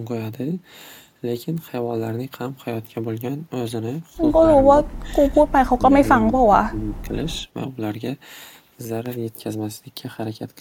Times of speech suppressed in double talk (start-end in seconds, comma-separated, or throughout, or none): 4.45-7.16